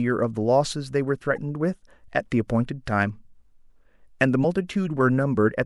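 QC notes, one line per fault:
1.36–1.38 s and 4.40–4.45 s, damaged data in a compressed stream: corrupted frames throw the decoder out of sync, producing brief glitches while it hunts for the next frame header.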